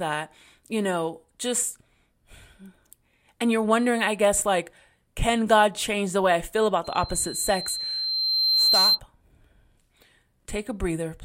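Loudspeaker feedback squeal from 6.84 to 9.00 s, just after "the way I feel": the microphone picked up its own loudspeaker, and at about 4.1 kHz the loop gain passed one, so a single piercing tone swells over roughly two seconds to about 5 dB above the speech.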